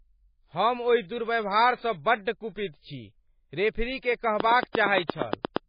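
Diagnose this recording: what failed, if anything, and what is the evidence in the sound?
The speech was most likely squeezed through an MP3 encoder at a very low bitrate; the heavy damage fits something around 19 kbps. Starved of bits, the codec stage discarded weak frequency lines, which flicker in and out between frames and give the audio a watery, swirling texture. It also imposed a fixed treble cut, so nothing is present above 5 kHz, leaving the speech dull and stripped of its sibilant detail.

From 4.40 s to 5.58 s a train of clicks rides over the speech, roughly ten of them at a regular 8.6 per second, peaking at around 15 dB above the signal. The near-identical pulses at a steady pace point to something injecting interference, likely in the analogue wiring or power path: nearby equipment, a faulty connection or a supply fault. The clicks are heard as a ticking over the speech.

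At 5.05 s the codec stage produces pre-echo lasting 49 ms, up to 5.09 s. A sharp attack landed late in a transform block, and the encoder spread the quantisation noise meant for the loud part across the whole block, including the quiet moment before it. The result is a brief hiss that arrives just ahead of the attack, smearing its onset.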